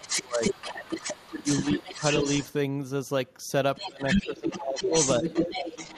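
From the start to 2.53 s the other side's voice is leaking through, about 5 dB under the talker, likely because the echo canceller left some loudspeaker sound in the mic. From 3.75 s to the end it comes back at roughly the talker's level. During that overlap the talker's speech is suppressed in double talk, dipping up to about 20 dB at 0.0–0.59, 1.40–1.47, 1.78–2.03, 3.82–4.01, 4.17–4.94 and briefly 5.19–5.23 s. That's likely the canceller turning everything down when it can't separate near speech from echo.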